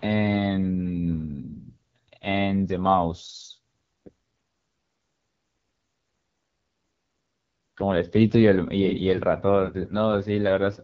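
Throughout, the AMR wideband (HD Voice) codec runs at a starved rate, which fits 8.85 kbit/s, so the speech sounds plainly rough and raspy.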